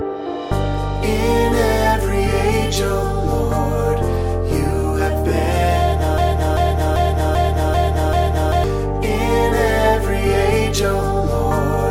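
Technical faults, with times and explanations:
6.18 to 8.64 s, broken-record loop: the same 0.39 s chunk of sound repeats six times back to back, and whatever should have played there is simply gone. That's likely the player or stream stalling and resending the last fragment it held.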